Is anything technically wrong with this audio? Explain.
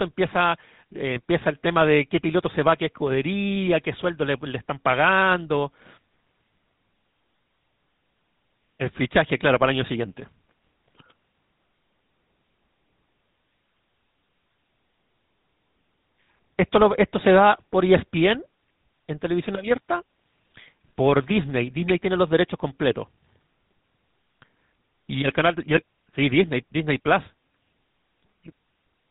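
Yes. Throughout the speech, the audio has passed through the GSM full-rate codec, whose character fits a 13 kbps rate. The codec models the vocal tract as a filter and drives it with a sparse, regularly spaced pulse excitation rather than the real waveform, discarding most of the fine detail. Nothing above about 3.9 kHz survives, so sibilants and air are gone, and the coarse excitation gives the voice a plainly audible buzzy, gravelly roughness.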